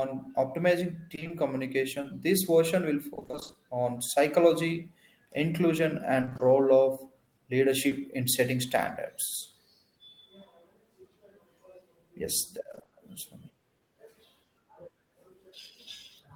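From 1.15 to 1.31 s the speech turns choppy and robotic: repeated packet loss (robotic sound), four 20 ms holes with half of that stretch synthesised by continuing the preceding sound. On a spectrogram it shows as a comb of smeared, flattened blocks where harmonics freeze and repeat; the waveform shows periodic copies instead of evolving cycles. At 2.01 to 2.05 s a short concealed packet loss fills a single 20 ms hole, heard as a brief smear.

The same robotic pattern returns between "this version will" and "on psychology inclusion", from 3.15 to 3.55 s, with ten 20 ms gaps concealing half the span. It appears again just after "on psychology inclusion", from 6.21 to 6.41 s, with five gaps. From 7.87 to 7.93 s, just before "in setting standards", a 40 ms short concealed packet loss leaves a brief smear. On a spectrogram this shows as a short stretch of held or noise-like texture that fades back into normal detail. 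The last burst of repeated packet loss, five gaps, runs from 12.71 to 12.91 s.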